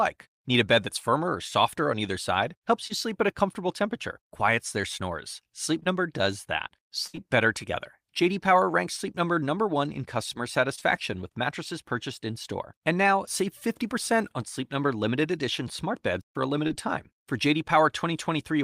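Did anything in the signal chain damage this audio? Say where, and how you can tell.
Yes, the network path lost audio. Short concealed packet loss appears at 2.87, 5.79 to 5.87 (just before "does that"), 7.15, 10.75 to 10.83 (after "in customer"), and 16.67 (after "smart beds for a"). Each hole was patched from the preceding sound. That leaves brief smears or wobbles.

A burst of packet loss hits from 7.07 to 7.15 s. About 60 ms vanished in a row. The receiver stretched the last sound and faded it, giving a held buzz or dying hiss. The speech then resumes further on, with that stretch missing.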